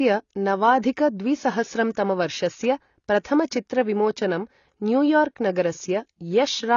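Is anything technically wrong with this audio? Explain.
Yes, there are two faults. Throughout the speech, the sound is dull and smeared, with nothing above 7 kHz and a plainly audible warbling, fizzy texture on sustained sounds and sibilants. This is likely AAC compression, pointing to AAC-LC at a low bitrate around 24 kbps. The coder quantises frequency lines coarsely, leaving gaps and a low cut-off. A simple low-pass filter would sound dull but clean, not watery.

From 0.81 to 0.83 s there is pre-echo: a short hiss of about 20 ms leads into a sharp attack, which sounds softened. Quantisation noise spread across the whole transform block fills the quiet moment before the onset. Unlike a click or dropout, it is a smear that anticipates the attack rather than a break in the sound.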